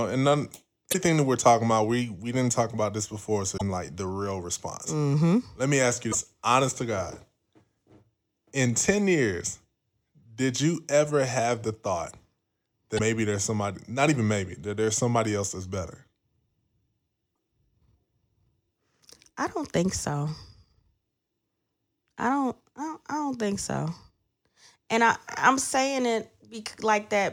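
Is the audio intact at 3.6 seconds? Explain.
No. Right after "talk about this before", from 3.54 to 3.62 s, the speech breaks into a brief glitch lasting under a tenth of a second, and it clears by "like the real response". This is damaged data in a compressed stream. A short stretch of the encoded bytes was corrupted, so the decoder misread those frames, lost sync and hunted for the next valid frame header before normal decoding resumed.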